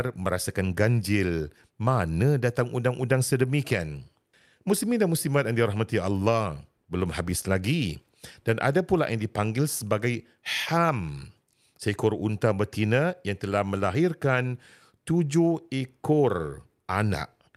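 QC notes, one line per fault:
No faults found.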